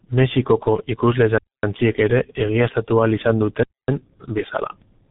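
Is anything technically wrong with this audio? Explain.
Yes. Throughout, the speech sounds heavily muffled and hoarse, with consonants smeared and nothing above 3.9 kHz. This is G.723.1 codec damage: long 30 ms frames and a slowly updated voice model, at a rate consistent with about 6 kbit/s, discard detail and blur fast transitions.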